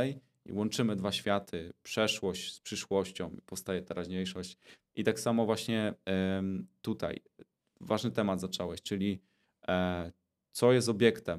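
A speech recording with no technical faults to report. Nothing in it calls for a time stamp or a cause.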